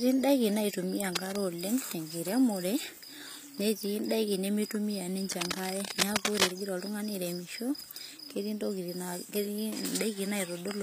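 Throughout the speech the treble sounds synthetic: sibilants come out gritty and metallic, the likely result of HE-AAC compression at a low bitrate around 24 kbps, with the upper band rebuilt from copied lower bands. On a spectrogram the high frequencies look smeared, blocky and repeated.

Cable scratch noise, likely from a worn connector being moved, adds a brief rustling burst from 1.15 to 1.36 s, about 5 dB below the speech, then a longer scratching stretch from 5.32 to 6.53 s at roughly equal level. Both appear as dense, ragged broadband streaks and jagged waveform spikes.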